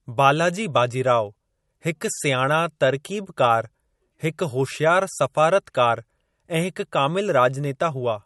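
A speech recording with two faults running through it. The first is plainly audible MP3 compression. The top end is missing above 11.9 kHz, and the speech has a watery, swirling quality with smeared consonant attacks, which fits a low bitrate of around 48 kbps. On a spectrogram this shows as a hard horizontal ceiling at 11.9 kHz across the whole clip, with patchy, flickering holes in the upper bands where weak frequency lines drop in and out from frame to frame. The second fault is clock slip clicks, faint regular ticks from 0.12 s to 8.22 s, about every 70 ms, so around 150 of them. The likely cause is two devices running on unsynchronised clocks that differ by a few hundred ppm, so a single sample is dropped or repeated each time the drift reaches a whole sample. Zoomed into the waveform, each slip appears as a tiny step or kink at evenly spaced points. On a spectrogram they show as faint vertical lines at a steady spacing, strongest where the speech is loud and absent in the gaps.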